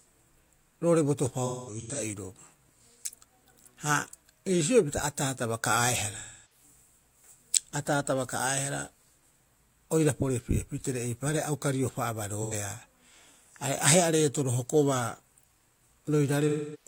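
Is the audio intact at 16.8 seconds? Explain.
No. AAC frame loss with concealment runs from 16.48 s to the end at 16.87 s. About 256 ms of coded audio is missing, which fits roughly six lost frames. The decoder rebuilds the gap from the last good spectrum, so the speech turns into a smeared, noisy or phasey patch, unlike a clean dropout's abrupt cut.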